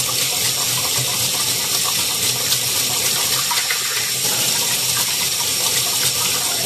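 From start to finish the sound is swirly, hollow and smeared, with blurred attacks and nothing above 14 kHz. This is likely generation loss: repeated lossy re-encoding, around four passes at a setting consistent with 64 kbit/s AAC-LC, each piling new quantisation noise and spectral holes onto the last.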